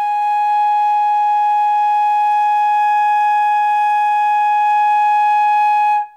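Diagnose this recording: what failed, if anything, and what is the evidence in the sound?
Nothing in this music stood out on listening as a fault at any stage of the chain.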